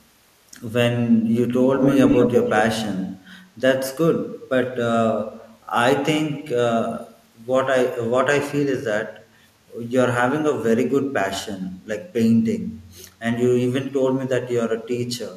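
From 1.77 to 2.62 s the speech is followed by a second copy of itself arriving 154 ms late, at roughly the same loudness as the original, so the two overlap. This is an echo leak, likely from a far end playing the call through a loudspeaker: its echo canceller failed to suppress what the microphone picked back up, and that residue was returned down the line.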